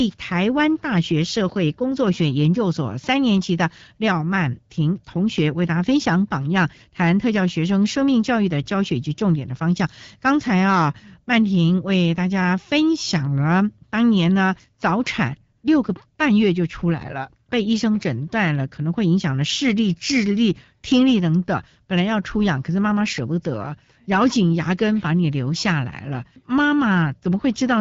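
From 15.57 to 15.63 s the background turns into a smooth hiss. This is AMR comfort noise: speech frames stopped for 60 ms and the receiver synthesised filler noise.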